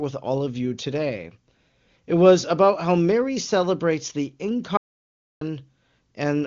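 A speech clip with an audio dropout to silence from 4.77 to 5.41 s, just after "celebrates the": the sound stops mid-flow and about 0.64 s of the speech is simply gone, with no room tone under the gap. On a waveform this appears as a flat line with abrupt edges. On a spectrogram it is a fully empty vertical band. The likely cause is a momentary loss of the input, such as a link fault or stray mute, while recording carried on writing silence. The wideband phone-codec character of the band-limited speech around the gap is faint.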